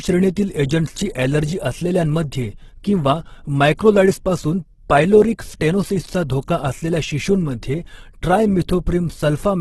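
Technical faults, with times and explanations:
Throughout, Opus compression: the speech comes across grainy and rough, with a noisy, hissy texture where the tonal parts should be clean. Nothing remains above about 12.2 kHz. The likely cause is Opus running in its music-style mode at a very low rate, which fits something near 12 kbps. With so few bits, the encoder keeps each band's overall energy but fills in the detail by copying lower bands or with noise, and that is where the graininess comes from.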